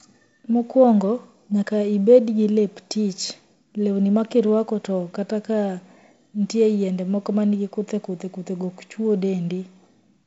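No faults are audible; the speech carries the signature of G.722 wideband telephone coding, with nothing above 7.7 kHz and the light coding noise expected of its 48 kbit/s mode.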